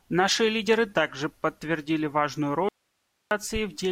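Right after "лидеры также подтвердили важную", at 2.69 s, the speech cuts out abruptly until 3.31 s, leaving roughly 0.62 s of faint hiss far below the normal level. This is an audio dropout to a faint residue, likely a lost signal while the path stayed live.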